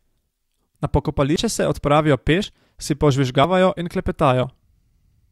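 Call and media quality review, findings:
Forward jumps in the speech at 1.36 s (just before "se odpravijo"), 2.44 s (just after "se odpravijo"), 3.44 s and 4.43 s, with no gap. Roughly 70 ms, 100 ms, 40 ms and 40 ms skipped. Likely a dropped buffer (overrun) in capture: samples overwritten before the application read them, so the surrounding audio is spliced directly.

Single tiny skip at 3.74 s. Overlap between stream segments, with 4.0 s segments: timestamps overlap, so the player trims audio that was never duplicated. A few milliseconds are removed and the waveform steps abruptly.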